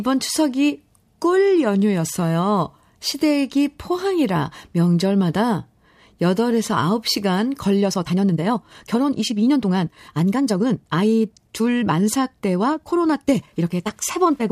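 Right around 7.79 s the pace suddenly jumps, and from there to the end at 14.51 s the speech runs about 1.48 times faster while the pitch stays put. That's a time-stretched section, most likely software squeezing the audio to fit a shorter length by dropping short slices to keep pitch steady. You can hear it as a rushed, hurried delivery.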